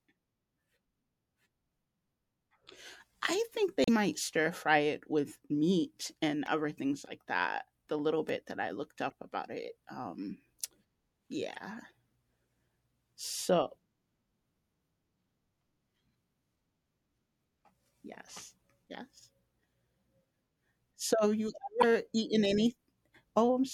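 Short glitches at 3.83 to 3.89 s, 6.46 s, 9.10 to 9.12 s, 11.54 to 11.57 s and 21.81 to 21.84 s come from damaged data in a compressed stream. Corrupted frames make the decoder lose sync and hunt for the next header, leaving a brief blip. At 8.29 s a tiny skip, about 10 ms of speech lost, is likely a dropped buffer (overrun), where unread samples were overwritten and the surrounding audio joined directly.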